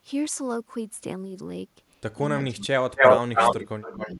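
From 2.47 to 2.99 s the speech sinks by about 35 dB. That's speech suppressed in double talk: with both sides talking, the echo canceller likely mistook this talker for loudspeaker echo. It does it again, briefer, at 3.21 to 3.38 s (about 30 dB), and again from 3.55 s to the end (about 25 dB).

Echo leak runs from 2.97 to 3.62 s: a copy trailing by 268 ms, roughly 10 dB louder than the speech. It likely comes from a far-end canceller missing its loudspeaker pickup. It returns at 3.81 to 4.15 s, around 10 dB quieter.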